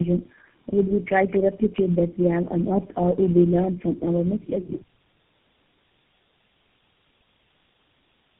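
Throughout, the speech carries tandem speech coding: it sounds rough, muffled and warbly, as if repeatedly re-encoded by about four low-rate speech codecs. A spectrogram shows a hard ceiling near 3.8 kHz, with blurred, smeared formant bands beneath it.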